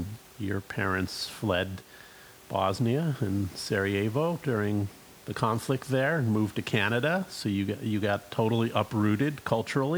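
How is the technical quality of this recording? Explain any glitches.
Nothing stood out on listening to the speech here, with only a faint room noise sitting about 24 dB beneath it.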